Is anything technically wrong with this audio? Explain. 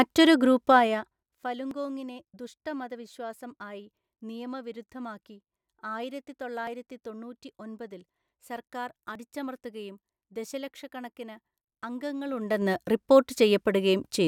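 Yes, there are two faults in this speech: zipper noise and short pieces of audio missing between chunks.

Zipper noise appears from 0.68 to 1.54 s, where the level falls by about 15 dB, and again from 12.23 to 12.70 s, where it rises by about 15 dB. Gain is applied in unsmoothed 2 dB steps, roughly 15 and 20 per second, so each step adds a small click and the fade has a ticking, zipping edge.

Skips occur at 1.71, 6.67 and 9.15 s. Each is a brief jump where something like 20 ms of speech disappears and the two sides are butted together with no gap. The regular spacing points to 2.5 s processing chunks, with the likely cause being a short piece lost at each chunk changeover.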